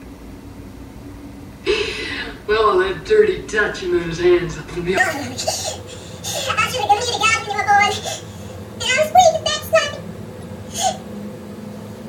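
Corrupt frame decoded, at 3.05 to 3.08 s and again at 10.41 to 10.43 s: damaged compressed frames were played anyway, their misread codes and gains putting energy at the wrong frequencies. Each is a brief chirpy blip, peaking about -20 dBFS first and about -25 dBFS later.

Section at the wrong speed, from 4.98 s to the end: playback runs 1.79 times too fast, so everything jumps roughly ten semitones higher and sounds hurried, with speed and pitch shifting together. The likely cause is the section being fitted to the wrong clock.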